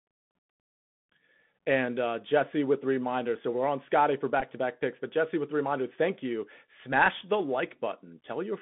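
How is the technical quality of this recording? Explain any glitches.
The technical quality is poor, with narrowband headset coding throughout and one brief glitch. Bluetooth CVSD headset codec: the whole clip passes only about 150 Hz to 3.6 kHz. Its one-bit step coding, which fits a 64 kbps link, leaves scratchy sibilants and granular hiss. Bluetooth headset packet repeated: from 4.40 to 4.43 s, roughly 11 ms of lost audio was refilled by replaying earlier packets. This fits about three lost packets and gives a short buzz near 267 Hz.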